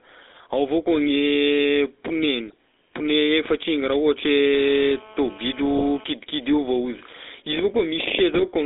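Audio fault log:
Throughout: GSM full-rate codec. The speech carries a buzzy, gravelly roughness typical of the original GSM coder, and its rate fits 13 kbps. That coder rebuilds the voice by exciting a vocal-tract model with regularly spaced pulses and keeps only a third of the excitation samples, so fine detail becomes coarse grit. The band is confined to about 300 Hz to 3.7 kHz, which leaves the sound narrow and boxy, and the damage is plainly audible.
2.47–2.54 s, 5.76–5.84 s, 8.33–8.47 s: GSM bit errors. Each burst breaks the speech into brief squawks, pops and gargling, and the last and longest one is the harshest. Flipped bits from a weak radio link reached the decoder and corrupted its filter, pitch and gain parameters for a few frames. The bent spectrum and misjudged levels produce these sudden distorted outbursts instead of clean speech.
4.54–6.04 s: GSM phone buzz. A hard, raspy buzz at 217 Hz with a dense stack of harmonics sits about 24 dB below the speech and has no relation to it. 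A nearby 2G phone on a call transmits in bursts 217 times a second, and the audio circuitry rectifies those radio pulses into audible sound. Because a call keeps the bursts regular, the buzz stays steady while it is present and overlaps the second bit-error burst.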